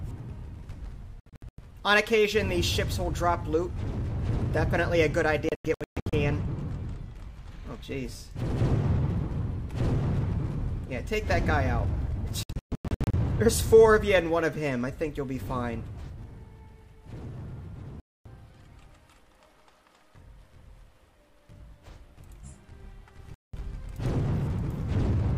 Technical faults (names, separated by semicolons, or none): digital broadcast dropout